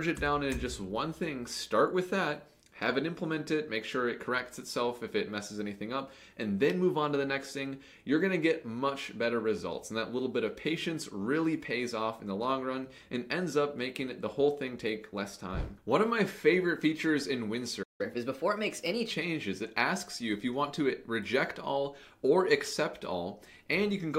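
At 17.82 s the audio just drops out for about 165 ms, a playback stall, likely the player running dry on data or its thread getting blocked, before sound resumes at 18.01 s. From 18.01 s to 19.11 s it runs 1.15 times fast, a catch-up at higher speed, with pitch up about two semitones while it burns off the backlog, then settles back to normal.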